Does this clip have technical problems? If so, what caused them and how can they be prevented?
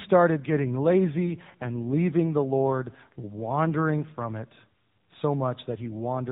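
Yes. An AMR rate drop occurs twice, from 0.40 to 4.27 s and again from 5.70 s to the end. Both times the mobile link weakened and the network told the AMR codec to spend fewer bits on the speech and more on error protection. The roughness fits a step down from the 12.2 kbps mode to the 5.9 kbps mode. With fewer pulses to model each frame, the speech turns buzzier and more synthetic, with no gap and no change in bandwidth. It returns to the cleaner narrowband sound of the 12.2 kbps codec between the two drops. Better radio coverage or signal strength at the caller's end, or a wideband or higher-rate codec with more headroom, would keep the link from forcing the lower mode.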